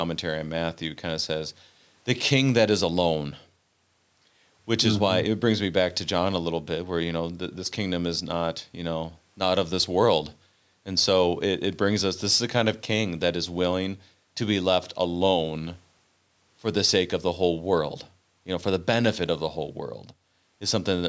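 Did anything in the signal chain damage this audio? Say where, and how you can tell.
No, nothing in the chain did any damage here; the speech has simply been through a call's microphone processing, which trims the deepest bass and leaves nothing above 8 kHz, and that's just how that stage normally behaves.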